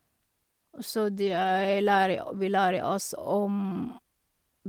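Lost packets rebuilt from error correction, 1.15 to 1.49 s. Packets went missing in this stretch, and the decoder filled each hole with the low-bitrate copy carried in the following packet (Opus in-band forward error correction). About 180 ms of rebuilt audio is spread through the stretch, which fits nine 20 ms frames. There is no silence or dropout. Instead the speech turns briefly rougher and grainier, with added noise, then clears once full-quality packets resume.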